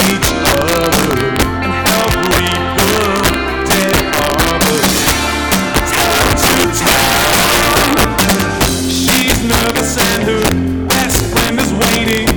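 Throughout the clip, integer overflow drives the signal about 9 dB past the integer limit, so around three percent of samples wrap to the opposite sign instead of clipping. Loud peaks become violent, sharp cracks. The waveform shows spikes flipping polarity, and the spectrogram shows broadband vertical streaks.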